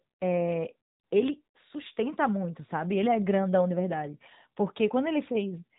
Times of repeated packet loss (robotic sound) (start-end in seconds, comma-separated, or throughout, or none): none